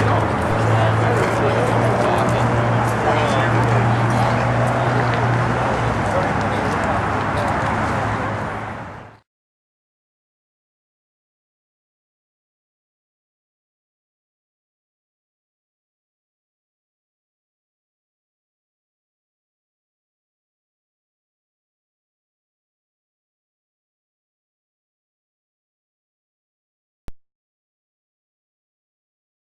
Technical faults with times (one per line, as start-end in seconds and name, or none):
0.51 DC step
27.08 DC step